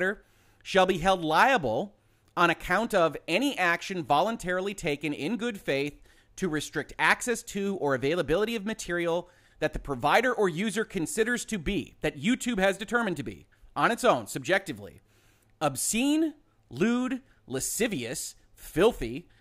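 No technical faults can be heard anywhere here.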